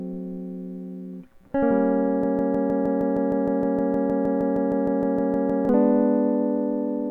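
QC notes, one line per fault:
2.24–5.69 s, broken-record loop: the music catches on a roughly 0.16 s fragment and plays it back exactly, 22 times in a row, so it stutters like a stuck groove. Likely the player or stream stalled and kept resending its last chunk, so that stretch of music is gone.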